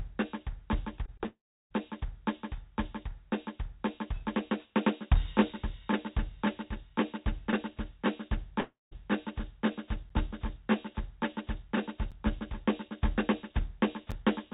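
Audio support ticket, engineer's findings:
Short concealed packet loss: three brief smears in the music at 1.06–1.09, 1.17–1.21 and 1.23–1.26 s. About 20 ms missing each time. Decoder extended the previous sound, then crossfaded back.

Long network dropout, likely cause: 1.26–1.72 s. Concealment buzz decays, then about 0.34 s of silence. Music resumes with that stretch gone.

Second long dropout: 8.60–8.93 s. Fading fill, then about 0.18 s silent. The lost section is never played.

Periodic USB or driver dropouts: from 10.09 s to 14.12 s, a tick every 2.0 s, about three in all. Each is roughly 10 ms of silence from a stalled bus or driver.

G.711 A-law call path at 64 kbps. Band stops at 4 kHz.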